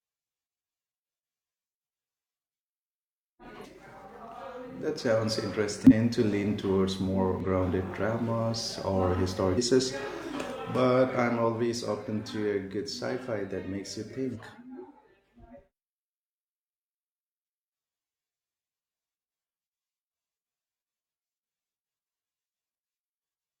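At 3.61–3.66 s, 5.87–5.93 s, 7.40–7.45 s, 9.54–9.58 s and 14.32–14.37 s, the speech is broken by brief glitches, each about 50 ms long, from damaged data in the compressed stream. The decoder misreads the corrupted frames, loses sync and produces garbled output until it locks onto a valid frame again. A spectrogram shows each as a narrow vertical disturbance, and the waveform shows a short, abrupt break.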